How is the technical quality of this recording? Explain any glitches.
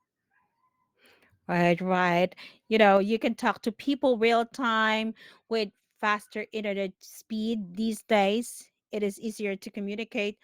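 One glitch stands out. At 2.97 s, just before "you can talk to", the speech and the background underneath it drop together by about 4 dB in a single instant, a microphone volume stepped down. Likely the call software judged the input too hot and lowered the device gain in one step. Unlike a speaker moving away or compressor pumping, the level falls abruptly and never recovers.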